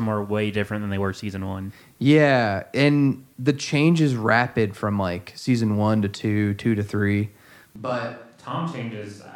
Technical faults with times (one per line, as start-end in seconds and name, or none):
7.76-9.36 switch to a distant microphone